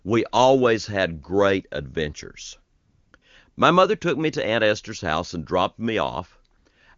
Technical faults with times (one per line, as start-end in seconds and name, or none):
2.75-3.21 AMR comfort noise
3.51-3.57 AMR comfort noise
6.57-6.65 AMR comfort noise